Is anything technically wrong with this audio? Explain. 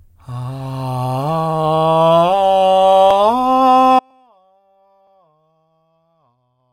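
Yes. At 3.99 s the music drops out abruptly and stays out to the end, an audio dropout to a faint residue. Only a faint sound remains, roughly 40 dB below the music's normal level. The likely cause is the wanted signal being lost upstream while the path after the break stayed live. That faint residue is what separates it from a clean digital mute, and the sudden change, with no taper, rules out a fade or a musical pause.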